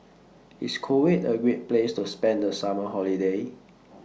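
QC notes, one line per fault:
The speech signal is intact, with no audible technical faults anywhere in the clip.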